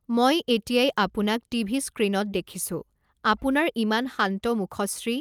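No technical faults can be heard anywhere in this speech recording.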